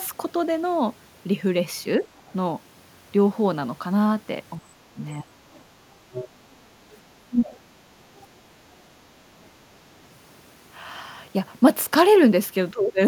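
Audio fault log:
2.17–8.26 s, other side's voice leaking through: brief scraps of a second voice at 2.17–2.33, 5.53–5.62, 6.12–6.28, 6.92–6.98 and 8.16–8.26 s. Most are very faint; the one at 6.12 s is clearly louder. The likely cause is loudspeaker echo left behind by the echo canceller. A spectrogram shows faint, separate harmonic streaks that don't line up with the main talker's.
4.6–13.0 s, speech suppressed in double talk: the talker's level drops sharply, by something like 20 dB at worst, at 4.6–5.37, 7.26–7.55 and 12.72–13.0 s. This is likely the echo canceller turning down both voices while the two sides overlap. The waveform envelope shows notches.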